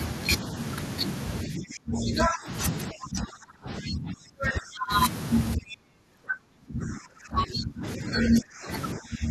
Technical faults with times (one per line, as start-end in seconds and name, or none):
1.45-4.92 speech suppressed in double talk
5.56-8.69 speech suppressed in double talk
8.95-9.30 speech suppressed in double talk